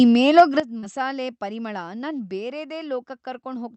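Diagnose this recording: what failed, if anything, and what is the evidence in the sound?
Between 0.38 and 0.42 s the loudest peak turns harsh and crackly, pushing about 4 dB past full scale, with around a tenth of the samples in that stretch flattened. The stage is the converter, and the likely cause is microphone overload: input gain was set so high that the peaks ran into the converter's ceiling. On the waveform the tops look squared off. On a spectrogram, broadband splatter appears above the harmonics at that instant.

At about 0.40 s, inside that distorted peak, the sound and its background both drop by about 3 dB in one step. This points to call processing, and the likely cause is the microphone volume being stepped down: the software detected the clipping and lowered the device's input level all at once. The waveform envelope shows a single abrupt step with no ramp. On the spectrogram, every band dims together at that moment.

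At 0.60 s everything, including the noise floor, falls by about 12 dB and stays there to the end. This is a sudden gain jump, likely a digital gain change applied between one sample and the next with no fade. That points to the driver or sample-format stage rather than the room. The waveform shows a sharp cliff in amplitude, and the spectrogram darkens uniformly across all frequencies from that instant.

From 0.79 to 0.85 s there is a brief smeared wobble in the speech, a short concealed packet loss. About 40 ms of audio never reached the decoder in time, and the receiver synthesised about 31 ms to cover the gap, continuing the previous sound before blending back into the real signal. This is a network fault, handled by the jitter buffer and Opus decoder. Detail above 8 kHz is absent throughout, consistent with the codec's bandwidth.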